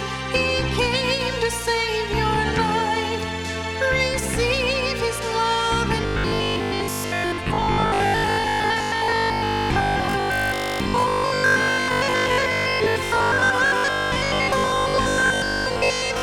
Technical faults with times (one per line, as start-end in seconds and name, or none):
6.02-16.22 robotic sound from repeated short buffers